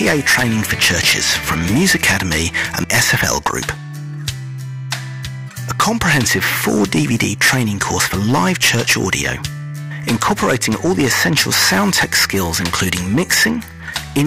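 Hard clipping runs throughout: the signal overdrives a stage by about 17 dB, flattening roughly 7% of samples and adding harsh high harmonics that fuzz every loud moment.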